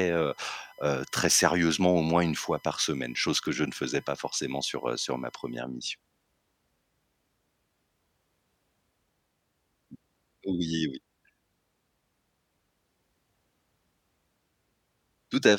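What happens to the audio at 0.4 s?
A faint, steady whine sits under the speech from 0.0 to 5.58 s, pitched at 1 kHz and strongest at 2 kHz: USB whine, leaking from the bus's 1 ms frame current.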